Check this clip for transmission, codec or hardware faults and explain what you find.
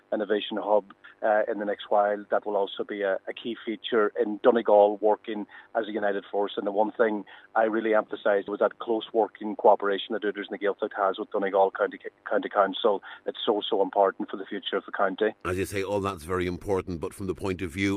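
No transmission, codec or hardware faults.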